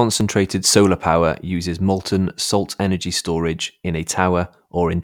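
No technical faults can be heard anywhere in the recording, which holds steady throughout with nothing interrupting or altering the signal.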